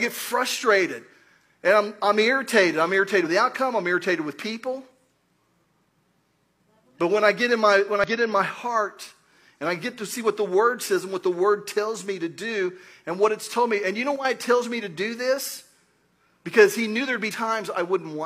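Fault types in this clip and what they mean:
Damaged data in a compressed stream: part of the encoded data was corrupted, so the decoder misread or rejected the affected frames, lost sync and had to find the next valid frame header. This happens three times in the clip: 3.21 to 3.25 s, 8.04 to 8.08 s, and 17.28 to 17.33 s. Each event lasts about 40 to 55 ms and breaks the audio briefly.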